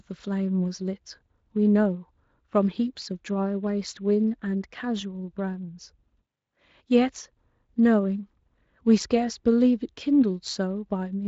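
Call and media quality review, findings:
No faults found in the speech; audio bandwidth tops out around 7.6 kHz, consistent with a wideband voice path.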